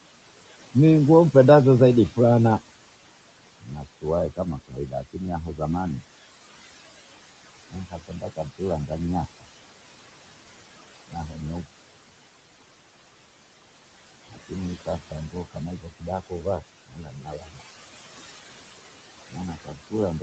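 A speech recording with noise suppressor artifacts throughout. The suppressor pulls the steady room noise down by about 17 dB, so the background sinks between phrases and rises underneath them. The noise suppressor also cuts speech, mistaking parts of it for noise. Quiet stretches sound swallowed at 3.6–4.05 s, 4.36–5.16 s, 7.71–8.91 s, 11.11–11.66 s, 14.86–17.63 s and 19.29 s to the end, with drops of about 13 to 17 dB.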